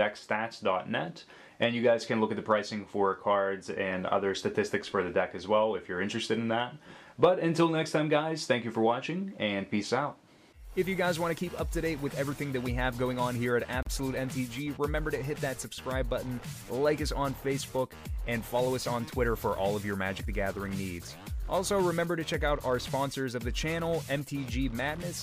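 At 13.83 s there's a gap at a join of encoded pieces, roughly 39 ms long. Two separately encoded pieces were butted together untrimmed, so encoder start delay and end padding left a short hole in continuous sound, which then picks up right where it stopped.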